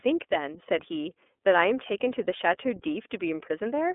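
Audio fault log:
Throughout, iLBC codec: the speech comes through narrowband and a bit rough and synthetic, with the codec damage plainly audible. Nothing gets past about 3.7 kHz, and the low end thins out below roughly 250 Hz, which fits a 13.33 kbps mode coding each 30 ms frame on its own.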